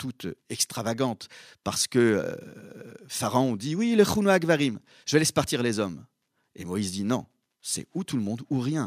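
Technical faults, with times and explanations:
No technical faults are heard in this speech clip.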